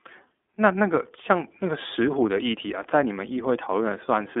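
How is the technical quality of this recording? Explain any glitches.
Technical quality is limited by iLBC codec damage, plainly audible across the whole speech clip. Each frame's excitation is coded independently, which fits 30 ms frames near 13 kbps, so the speech sounds rough and synthetic. A spectrogram shows content confined to roughly 300 Hz to 3.6 kHz, with nothing above 3.8 kHz.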